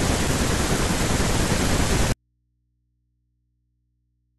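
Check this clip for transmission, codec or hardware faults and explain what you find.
There is one fault, an audio dropout to a faint residue. From 2.12 s to the end, the wanted signal is likely lost upstream while the path after the break stays live. The speech cuts off abruptly, leaving only mains hum, far below normal level at roughly 50 dB down.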